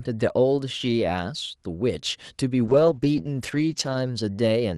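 At 2.7 s the speech goes through a call bitrate drop that lasts until about 4.05 s. The call's bandwidth estimate fell, and the encoder starved the signal of bits. The sound points to a fall from around 64 kbps to roughly 13 kbps, held at its lowest for about 1.3 s. Speech turns rough, watery or muffled. On a spectrogram, the energy that reached up to 12 kHz on the call path gets cut off lower, and the remaining bands look blotchy and smeared.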